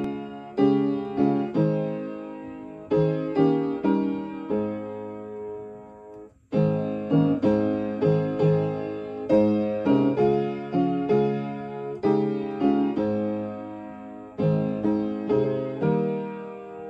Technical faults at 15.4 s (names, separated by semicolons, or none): compressed frames skipped